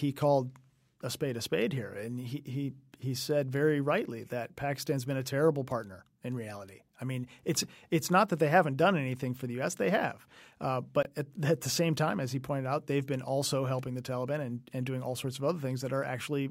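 At 11.03 s, after "have uh", the speech drops out for 21 ms and resumes at 11.07 s on "at at the same" as though it had kept playing. This is a Bluetooth dropout, likely one late packet discarded. The waveform shows a flat gap, and the spectrogram a thin blank vertical stripe.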